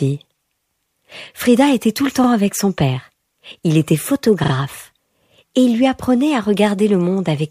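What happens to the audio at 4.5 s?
A repeated buffer occurs from 4.44 to 4.52 s. New audio arrived late, so the same short piece, which fits a 40 ms buffer, was played twice more with a hard join at each repeat. It sounds like a brief stutter, with almost nothing skipped.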